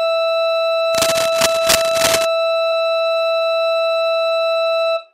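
From 0.95 to 2.25 s there's a rough, uneven scratching and rustling laid over the music, sitting only a little below it. That's cable scratch noise, most likely a worn lead or connector being shifted, so its contact resistance jumps around and spits bursts of noise into the signal.

Then at 2.71 s there's a quick blip. That's damaged data in a compressed stream: some of the data went bad, the decoder misread that frame, lost sync, and had to hunt for the next valid header before it could carry on.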